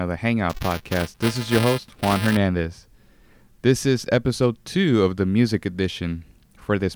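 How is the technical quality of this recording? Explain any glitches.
One glitch stands out in the speech. From 0.49 to 2.37 s, buffer tearing causes a steady 375 Hz robotic buzz, which fits a 128-sample buffer. Writer and reader cross each period, splicing a small slice of audio a few milliseconds old. Unlike crackle, it is periodic and follows the signal.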